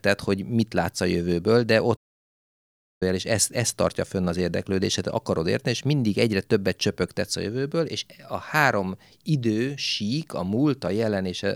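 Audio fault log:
1.96–3.03 s, playback stall: right after "látsz a jövőből de" the speech just stops dead for about 1.05 s of silence, then carries on with "és ezt ezt tartja". It simply freezes mid-flow and resumes. That's the signature of the player running dry, likely a buffer underrun or a blocked playback thread, so nothing reached the output until data started flowing again.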